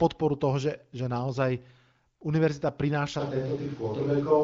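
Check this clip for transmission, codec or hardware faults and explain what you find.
One fault, right at the end. From 3.21 s to the close, the sound turns roomy and hollow and loses bass, with room noise coming up to roughly 30 dB below the speech. The level barely changes. It's most likely a switch to a distant microphone, with the close mic's feed dropped. The AMR wideband (HD Voice) coding underneath has only light artefacts, which fits a rate around 16 kbit/s.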